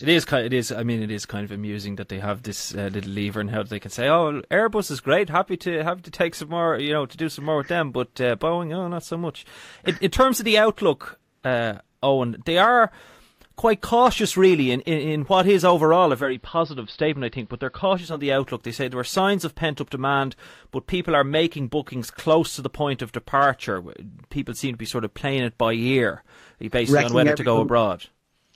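Speech, in which a hybrid receiver briefly lost its digital signal and blended to the AM analogue broadcast from 16.12 to 18.28 s: digital radio blending to analogue. A 0.35 s cross-fade brings in faint hiss and drops the level about 2 dB.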